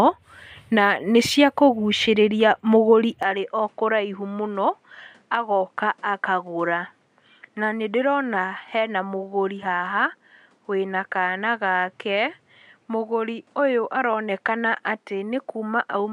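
A speech recording whose sound changes abruptly at 3.23 s and stays changed to the end: the top end disappears, with nothing above about 11.4 kHz, the level falls by around 5 dB, and a new noise floor appears roughly 40 dB under the voice. There is no silence at the join. The likely cause is an input switched to a poorer device. A plain filter or codec bandwidth drop would dull the sound without also bringing a new noise floor and level.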